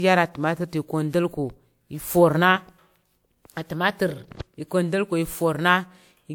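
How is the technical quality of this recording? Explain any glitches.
The speech is degraded throughout by generation loss. From start to finish it sounds swirly, smeared and hollow, and consonant attacks blur. The likely cause is repeated lossy re-encoding, about four passes, each quantising on a shifted frame grid. The audio still reaches 20.1 kHz, which fits a WMA chain at 128 kbit/s.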